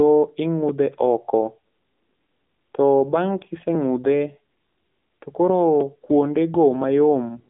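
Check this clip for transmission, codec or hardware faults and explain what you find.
One codec fault runs through the whole clip. AMR narrowband mobile codec: low-rate AMR-NB vocal-tract modelling, consistent with roughly 7.95 kbps, strips everything above 3.6 kHz, leaving buzzy, synthetic-sounding speech.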